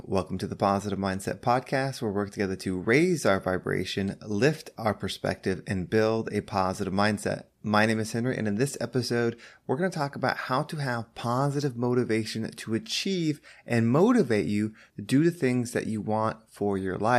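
No technical faults are audible anywhere in the speech recording.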